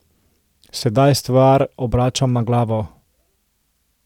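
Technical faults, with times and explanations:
0.76 to 0.82 s, chunks out of order: there's a quick jumbled blip in the speech here, where one 20 ms slice of audio turns up two slices late, so it plays after the two bits that should have come after it. Nothing actually goes missing, but the shuffled order leaves three hard joins packed into about 60 ms. That's why you hear a brief garbled stutter.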